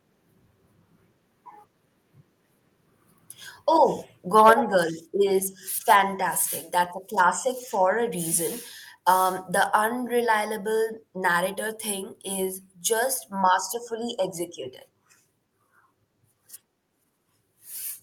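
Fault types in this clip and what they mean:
Microphone overload: From 4.38 to 4.51 s the peaks flatten and pick up a harsh, crackly edge, pushing about 5 dB past the ceiling with a few percent of samples squared off. That's likely the mic input set too hot for the converter.
Microphone volume stepped down: At 4.53 s, right after that distorted burst, everything drops by about 5 dB in one step, the voice and background together. Likely the call software spotted the clipping and cut the device's input gain.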